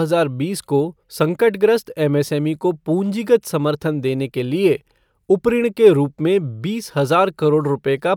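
Listening to the speech recording, nothing technical stood out as wrong at any point.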